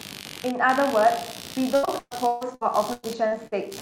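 Throughout the clip, computer activity noise leaks in: load changes in the processor, graphics card or mouse shift the ground the audio circuit shares with them, and that disturbance rides into the recording. It sounds like a buzzing, chirping scratch pulsing at roughly seventy times a second, sitting some 15 dB below the speech. Because it follows the computer's workload rather than the talker, it persists through pauses and never tracks the speech.

From 1.75 s to 3.54 s, repeated packet loss sets in. Packets go missing or arrive late again and again, and each hole is bridged by extending the last stretch of sound before the next gap arrives. Around 600 ms of audio is lost and about 600 ms is synthesised to cover it, roughly a third of that span, with the longest gap at 141 ms. The speech turns choppy, with pieces dropping out.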